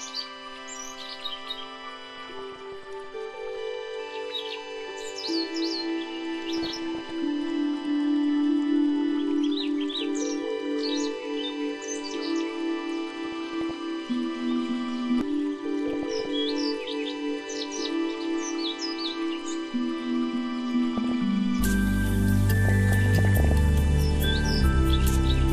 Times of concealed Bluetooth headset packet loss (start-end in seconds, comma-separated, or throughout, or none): none